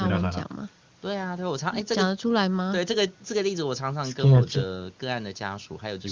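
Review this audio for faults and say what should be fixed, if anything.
No faults; nothing needs fixing.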